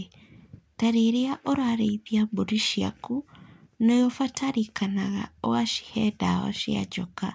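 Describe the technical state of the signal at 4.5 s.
At 4.5 s, as throughout the clip, aliasing is present: a rate drop, which fits 16 kHz, skipped the anti-alias filter, folding content above 8 kHz back down, roughly 25 dB under the speech, as gritty, metallic sibilants.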